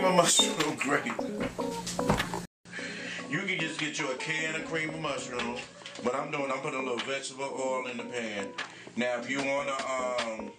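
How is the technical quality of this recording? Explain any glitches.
The recording degrades partway through. At 2.45 s, after a 200 ms silence, the sound turns duller and about 10 dB quieter, with nothing above 9.3 kHz and a faint new background noise, to the end. The likely cause is the input switched to a poorer device.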